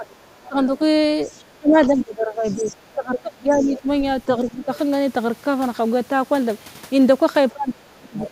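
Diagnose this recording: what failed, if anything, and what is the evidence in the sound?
Speech suppressed in double talk, at the call-processing stage: the speech dips by about 20 dB at 0.0–0.8 s and 1.58–4.7 s, and by about 30 dB at 7.52–8.31 s. Unlike a network dropout, these dips line up with the far-end voice, likely because the echo canceller is turning down both sides.

The other side's voice leaking through, also in call processing: a second, quieter voice appears at 0.11–0.48 s, 1.29–3.79 s, 4.74–4.78 s and 8.19–8.29 s, about 30, 20, 20 and 15 dB below the speech. This is distinct talk, not reverberation, and is likely residual loudspeaker echo.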